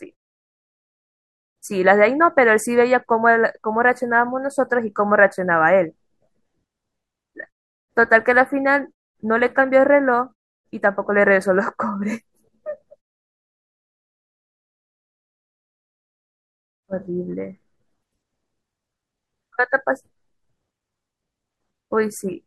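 A speech clip with nothing technically wrong with it.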